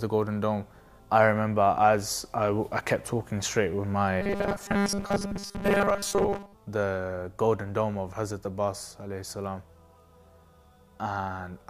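Between 4.21 and 6.55 s the sound collapses into a rigid, metallic drone pitched at 200 Hz: robotic sound from repeated short buffers. New audio is likely arriving too seldom, so playback keeps looping a 5 ms fragment, and most of the passage, around seventy percent, is repetition rather than fresh material. On a spectrogram this shows as evenly spaced flat harmonic lines at multiples of 200 Hz. The waveform shows identical cycles repeating every 5 ms.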